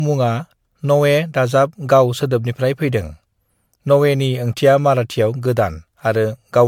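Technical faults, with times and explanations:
Throughout: generation loss. The speech sounds swirly, hollow and smeared, with softened consonant attacks, likely from about seven rounds of MP3 coding near 100 kbit/s, each adding fresh quantisation noise. A spectrogram shows flickering holes and smeared onsets beyond what one pass would leave.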